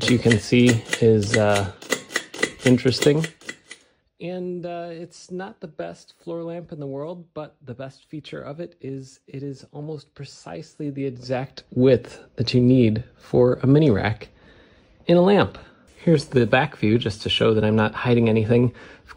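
From 3.07 to 3.62 s the level drops by roughly 15 dB, and from 10.68 to 11.95 s it rises by about the same. Both moves show zipper noise: the gain is applied in coarse steps, around 150 a second, instead of smoothly. Each step leaves a tiny click, so a fine ticking rides on the sound. The waveform shows a staircase envelope, and the spectrogram shows faint evenly spaced vertical lines.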